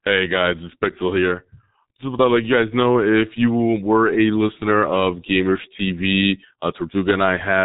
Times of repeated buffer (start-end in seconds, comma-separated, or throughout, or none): none